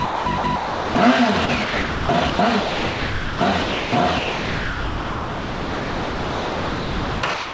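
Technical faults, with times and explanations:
0.05–0.95 s, 1.46–3.92 s and 4.19–7.53 s, sound chopped by the voice detector: the audio cuts in and out, with about 0.66 s, 1.68 s and 3.23 s of real sound swapped for comfort noise. The likely cause is the sender's voice detector toggling transmission. The real sound stops at 8 kHz, which fits a G.722 call path.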